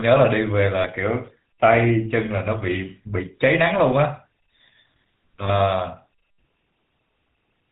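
From the start, the speech carries the buzzy, gravelly roughness of the GSM full-rate codec, which points to 13 kbps GSM. Unlike simple telephone band-limiting, this is more than dullness above 4 kHz. The pulse-driven vocal-tract model adds a grating texture throughout.

At 0.80 to 0.86 s and again at 5.44 to 5.49 s come lost GSM frames, about 40 ms and then 20 ms, which fits two lost frames and then one. The decoder repeats the last good frame. The result is a brief metallic ring rather than a silent gap or click.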